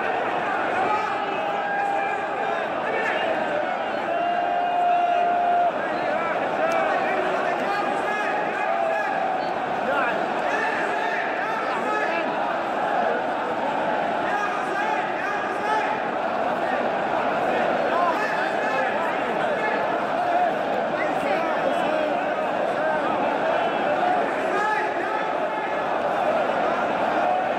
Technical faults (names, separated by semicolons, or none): none